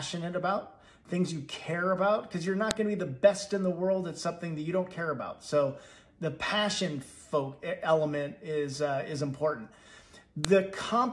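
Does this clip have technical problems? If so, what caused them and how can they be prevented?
Yes: sharp, loud clicks at 2.71 s and 10.45 s are a file header played as audio, where a WAV piece was joined without stripping its header, so those bytes became samples. Strip each piece's header before concatenating or streaming.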